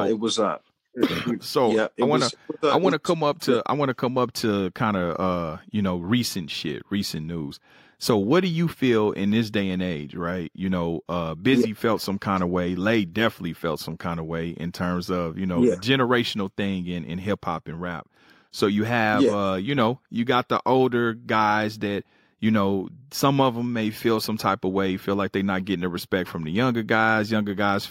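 No technical faults can be heard anywhere in this speech.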